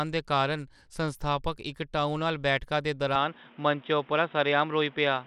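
From the first moment, the speech carries a plainly audible gritty roughness, most likely from Bluetooth SBC compression. The bandwidth still reaches about 21 kHz, but coarse sub-band quantisation leaves the treble unsteady and adds grainy noise and aliasing. The grit suggests a bit budget of around 96 kbps. Unlike the swirly artefacts of codecs built on a hearing model, SBC's damage is a flat, even grain across the whole clip.

At 3.16 s, the sound suddenly turns dull and boxy and stays that way to the end. Nothing is left above 3.8 kHz, and a new background noise appears, sitting well below the speech. This change points to an input switched to a poorer device, such as a headset's call profile. There is no silence at the switch and no jump in level. What separates this from a simple filter is that the tone and the noise floor change together at one instant.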